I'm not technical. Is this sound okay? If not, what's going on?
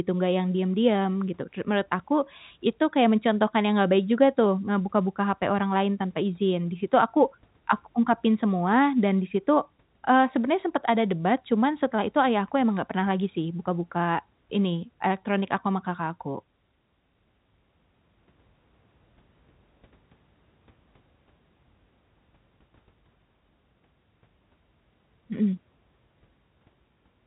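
Yes, this sound is okay; it's ordinary phone-line speech, and nothing is going wrong in it.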